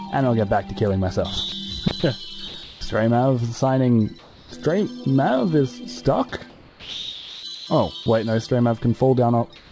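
The audio comes through a WebRTC-style call path whose content stops at 8 kHz, which fits a wideband codec such as G.722. Its faults come from the sender's voice detector. It likely misjudged real sound as background and stopped sending, so the receiver filled the gaps with comfort noise. This sound dropped by the voice detector is heard three times. At 1.49 to 1.52 s a 30 ms piece vanishes. At 2.48 to 2.54 s about 50 ms is lost. The longest loss runs from 6.50 to 7.43 s, where about half a second of real sound gives way to steady synthetic noise until the detector triggers again. Between 1.88 and 2.03 s the detector likely toggled on and off more than once. That is sound chopped by the voice detector, and it leaves holes totalling about 60 ms within that stretch instead of one clean gap. During pauses the sender likely switched to discontinuous transmission, so comfort noise in place of the background appears at 2.48 to 2.81 s, 4.19 to 4.52 s, 6.50 to 7.67 s and from 9.56 s to the end. 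In each of these the real background is swapped for a smoother noise. At 4.19 s and at the close the real background sits about 27 dB below the loud parts. That noise is about 5 dB quieter at 4.19 s and about 4 dB quieter at the close.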